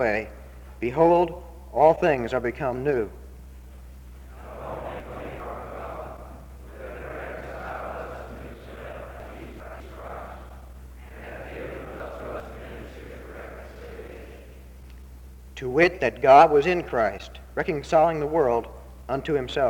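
The audio has three jumbled moments caused by chunks out of order: at 5.0 to 5.4 s, 9.2 to 9.8 s, and 12.0 to 12.4 s. Each involves 200 ms blocks. In the first and third, one block plays after the block that should follow it. At 9.2 s, one block plays two positions late. Nothing is lost, but the three hard joins at each misplaced block produce a brief garbled stretch.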